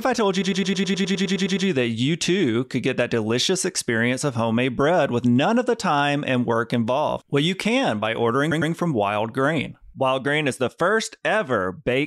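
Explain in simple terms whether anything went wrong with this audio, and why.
Repeated frames: a short block of compressed speech, about 0.1 s long and fitting roughly four frames, was stored or sent again and again. From 0.41 to 1.66 s it replays twelve extra times, and from 8.50 to 8.71 s twice more, producing a stutter and adding about 1.25 s and 0.21 s.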